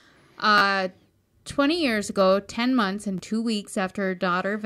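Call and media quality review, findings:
Repeated buffer, 0.58 to 0.62 s: short buzzy stutter, one piece of about 11.6 ms played three extra times with hard joins, which fits a 512-sample buffer. Playback output starved of new audio. Around 40 ms of sound lost.

Repeated buffer, 3.18 s, right after "months and": single click, one extra play, roughly 10 ms lost. Same output path. Identical repeated sound with hard joins at the seams, not a silent gap, rules out a plain dropout.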